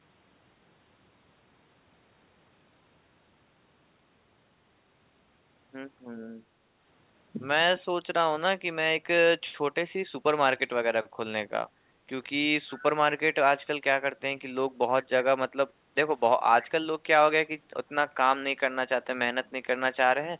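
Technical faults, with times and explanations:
11.7–12.07 s and 15.72–15.95 s, background gated by the echo canceller: the room sound sinks by about 6 dB, then about 7 dB, for roughly a third and a fifth of a second. The canceller clamped the microphone while far-end audio played, then released it.
16.62–16.67 s, echo leak: a brief, faint scrap of the speech returns 356 ms late, about 25 dB below the main speech and band-limited to 4 kHz by the G.711 call path. It is likely loudspeaker pickup the far end's echo canceller failed to remove.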